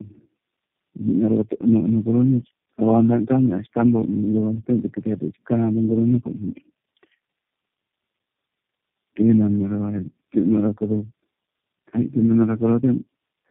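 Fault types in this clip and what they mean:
Tandem speech coding: the speech sounds like it went through several low-rate phone codecs in a row, maybe four, each recoding the last one's damage, so it's rough, muffled and warbly, with nothing above 3.5 kHz, and the final stage sounds like G.729A.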